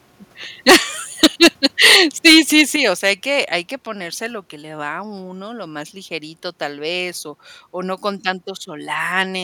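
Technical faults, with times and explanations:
0.68–0.76, 1.23–1.96, 2.25–2.61 and 3.06–3.10 s, microphone overload: the loudest peaks get their tops sheared off, about 12, 11 and 10 dB over at first, so a big chunk of that first burst is flattened and sounds harsh and crackly. The last one, just before "hay que hay que", is only about 3 dB over and much milder. The likely cause is an input level set too hot for the converter.
0.70 and 2.76 s, microphone volume stepped down: the whole sound, background included, suddenly sits lower, by about 2 dB the first time and a much more obvious 7 dB the second, the first in the middle of a clipped stretch and the second right after one. That's likely the call software spotting the overload and pulling the input gain down in one jump.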